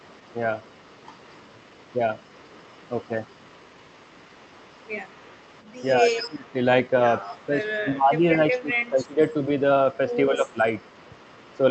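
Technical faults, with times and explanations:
0.0–6.53 s, 6.86–7.79 s, 8.5–9.62 s, 9.93–10.16 s and 10.49 s to the end: echo leak. A faint copy of the speech trails it by 209 ms. It sits roughly 30 dB down, louder near 9 s. The far end's echo canceller likely missed part of its loudspeaker pickup.
6.01–6.55 s, 7.46–9.2 s and 10.3–10.58 s: speech suppressed in double talk. The main talker dips while the echoed sound overlaps. The deepest drop is near 20 dB, then shallower. The echo canceller likely could not separate both signals, so it turned everything down.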